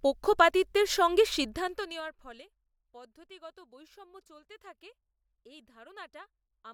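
Zipper noise runs from 1.4 to 2.44 s in this speech clip, right after "পক্ষপাতিত্বের সঙ্গে" and before "পদ্ধতিগত বৈষম্য চলতে থাকে". The level drops by roughly 25 dB in unsmoothed 2 dB steps, about fifteen a second, and each jump leaves a small click, producing an audible ticking.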